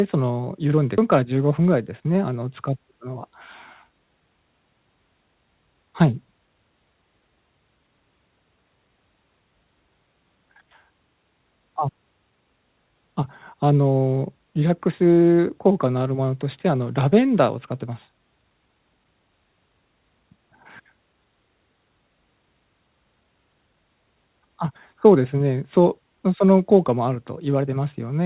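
At about 0.98 s the speech lurches forward with no gap or fill: roughly a second of material is simply gone, and the audio on either side is butted together. This is a skip ahead. A stretch of audio was discarded, either lost in transit or dropped by an overfull jitter buffer, while later packets were already queued. Playback jumped to those waiting packets, and the receiver's delay shrank by about a second in one step.

From about 1.18 s to 2.15 s the talker sounds slightly rushed, running about 8% fast while the pitch stays where it was. This is a jitter buffer speed-up. After the backlog, the buffer still held more audio than its target, so the receiver trimmed short slices one or a few pitch periods long, again and again. Altogether roughly 70 ms was removed, which compresses the timing without shifting the pitch. All of this sits on a narrowband call path with nothing above 4 kHz, which fits a G.711 codec.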